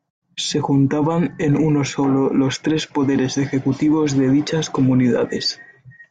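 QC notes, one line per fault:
No faults found. Nothing in the speech calls for a QC entry.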